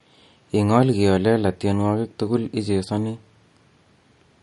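All the way through, the speech has nothing above about 11.2 kHz and a watery, swirly quality that's plainly audible, with s sounds going metallic. That's likely MP3 compression, squeezed hard enough to fit a bitrate around 48 kbps, cutting the top end and switching weak detail on and off.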